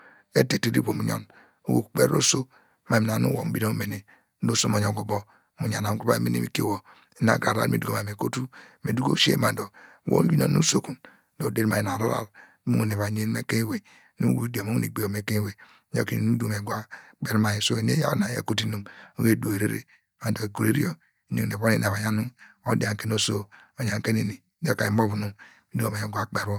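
No technical faults are audible anywhere in the speech recording.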